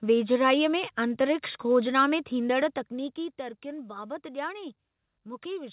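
No faults are audible here.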